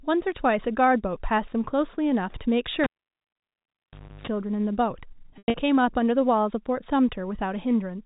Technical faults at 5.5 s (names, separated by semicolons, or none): packet loss with pitch repetition